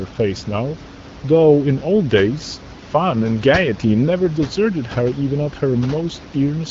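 No technical faults occur in the signal: the speech comes through an AMR wideband (HD Voice) codec at 12.65 kbit/s with only the light coding texture expected at that rate, and the room noise sits about 16 dB below the speech.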